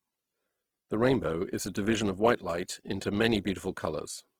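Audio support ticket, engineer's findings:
Speech grainy, rough and noisy throughout, damage plainly audible, full bandwidth retained, little swirl, few spectral holes. Likely Opus compression, CELT music mode: bit-starved bands refilled by folding lower bands or injecting noise, pointing to around 16 kbps.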